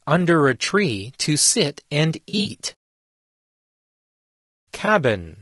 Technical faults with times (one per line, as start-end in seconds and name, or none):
0.00-5.42 low-delay AAC compression
0.65-0.68 AAC frame loss with concealment
2.29-2.47 AAC frame loss with concealment
4.85-4.88 AAC frame loss with concealment